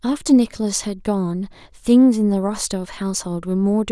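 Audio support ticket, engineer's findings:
No technical faults found in the speech signal; nothing in the audio points to a defect in any component along the chain.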